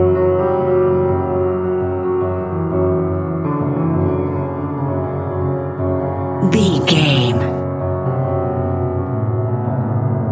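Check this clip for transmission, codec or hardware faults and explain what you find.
Nothing stood out on listening to the clip; no fault of any kind could be heard.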